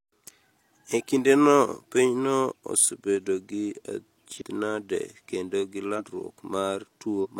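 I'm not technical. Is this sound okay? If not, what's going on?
No. At 4.37, 5.95 and 7.20 seconds, compressed frames are skipped: small chunks of the speech go missing, so it jumps ahead.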